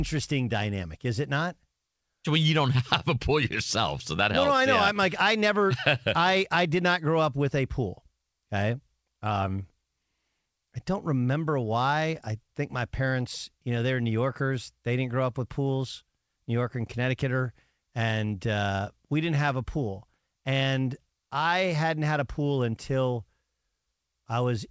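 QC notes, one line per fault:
No faults found in this speech clip.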